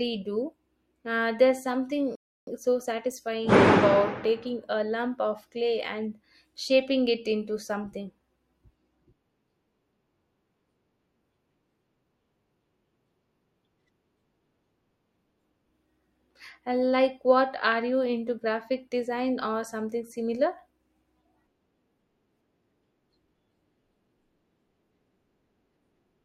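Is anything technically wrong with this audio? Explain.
Yes. At 2.15 s the speech cuts to silence for about 0.32 s, then resumes at 2.47 s with "so satisfying about taking". This is a rebuffering stall: playback drained its downloaded audio and paused until more data arrived. Nothing is skipped; the stream simply picks up where it stopped, adding roughly 318 ms.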